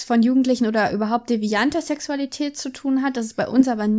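Listening to the speech recording, nothing stood out as a technical problem.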